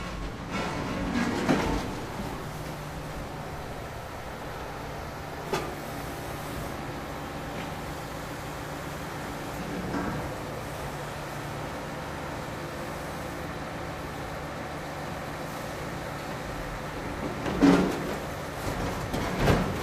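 At 8.45 to 8.48 s, and again at 10.22 to 10.24 s, a corrupt frame was decoded. Flipped bits in a single compressed frame led the decoder to place energy at wrong frequencies. Each is a short, fairly quiet glitch, the second softer.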